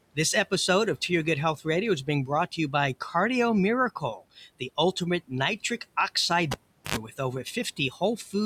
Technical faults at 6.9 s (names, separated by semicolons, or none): cable pulled and plugged in